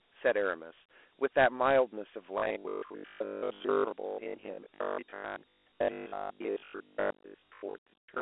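A speech clip carried as Dialogic VOX ADPCM throughout, its coarse 4-bit steps adding a plainly gritty hiss that trails the speech. This fits about 32 kbps. A spectrogram shows energy confined to roughly 300 Hz to 3.4 kHz with a hard empty ceiling above 3.8 kHz. From 2.38 s to 8.20 s the sound becomes a robotic, metallic buzz at a fixed 50 Hz, most likely from repeated short buffers of about 20 ms replaying while most of the real audio is skipped. The waveform shows identical 20 ms blocks, and the spectrogram shows rigid harmonic lines every 50 Hz.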